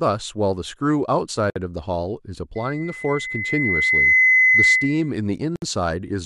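At 1.50 s and again at 5.56 s, about 4 s apart, a gap at a join of encoded pieces cuts the speech for 57 ms and then 64 ms. Separately encoded segments were spliced with their start-up delay and end padding left in, so the speech drops out and resumes where it left off. From 2.55 to 5.12 s a loudspeaker feedback squeal takes hold: the microphone picks up its own loudspeaker, and a 2 kHz tone swells over roughly a second and a half to about 10 dB above the speech.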